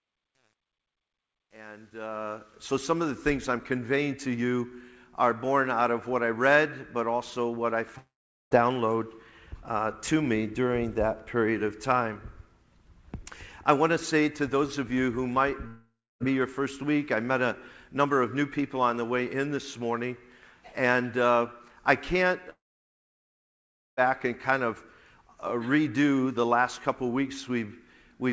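From the start to 2.6 s, the fade-in suffers truncation distortion: the volume stage drops low-order bits without dither, consistent with about 10 bits kept. The quietest stretch, up to 2.03 s, turns gritty, unlike a simple noisy fade, whose hiss stays continuous.

At 7.98 to 8.53 s, 15.67 to 16.22 s and 22.50 to 23.99 s, the sound breaks off, briefly trails into a fading buzz or hiss, then goes silent, most likely a long network dropout. Silence lasts about 0.43 s, 0.28 s and 1.41 s. Afterwards the sound resumes further on with the gap's material missing, rather than stalling and catching up. Throughout, the call codec path leaves nothing above 8 kHz.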